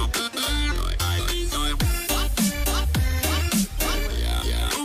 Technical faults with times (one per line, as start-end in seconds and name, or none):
1.27-4.26 digital radio blending to analogue